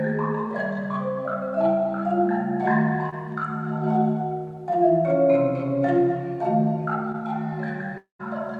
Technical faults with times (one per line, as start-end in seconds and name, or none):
3.09-3.14 short concealed packet loss
7.12-7.16 short concealed packet loss
7.98-8.21 long network dropout